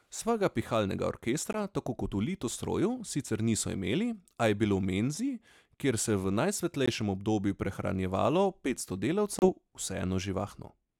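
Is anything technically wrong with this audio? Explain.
Yes. Brief silent gaps cut the speech at 1.53–1.57 s, 6.86–6.88 s and 9.39–9.49 s, likely a Bluetooth dropout: late packets were discarded, and the audio resumes further on with about 15 ms, about 15 ms, then about 30 ms, skipped.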